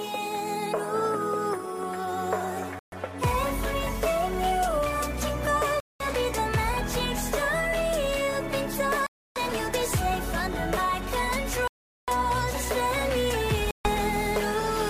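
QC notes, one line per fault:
2.79 to 13.87 s, Bluetooth stall: the sound drops to silence five times, at 2.79 s for about 130 ms, 5.80 s for 200 ms, 9.07 s for 290 ms, 11.68 s for 400 ms and 13.71 s for 140 ms, then resumes abruptly. The likely cause is radio interference delaying packets until the headphones' small playback buffer emptied, so output halted outright rather than degrading, and restarted only once the retransmitted audio caught up.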